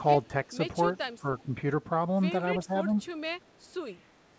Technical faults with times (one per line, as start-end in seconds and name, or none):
0.48-0.53 speech suppressed in double talk
1.21-1.53 speech suppressed in double talk
2.65-2.91 speech suppressed in double talk
3.48-3.57 echo leak